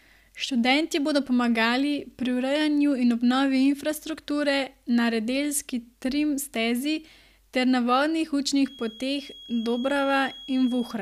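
A loudspeaker-to-microphone loop most likely sits just at the edge of feedback here, so a single high frequency keeps ringing without building into a howl. From 8.58 s to the end of the clip, that feedback whistle appears as a thin, steady tone at 3.3 kHz behind the speech, roughly 20 dB below it, swelling and fading slowly in level rather than growing.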